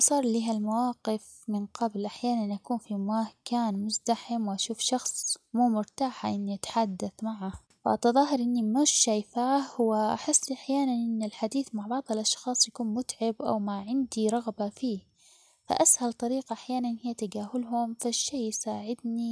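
Aliasing runs through the whole of this speech recording. The sound behaves as if it was resampled to about 22 kHz with no anti-alias filter, so content above the 11 kHz fold point mirrors back down to unrelated lower frequencies, roughly 25 dB under the speech. Sibilants come out gritty and metallic, and the spectrum stays full right up to the band edge. A clean resample would instead roll off smoothly before 11 kHz and leave esses dull rather than harsh.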